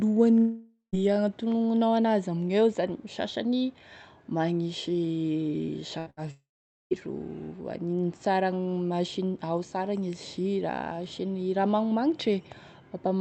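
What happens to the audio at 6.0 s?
Two bursts of packet loss occur close together, from 5.99 to 6.08 s and from 6.10 to 6.19 s. In each, the receiver extends and fades the last received sound for about 70 ms, then speech resumes with roughly 80 ms and 60 ms missing.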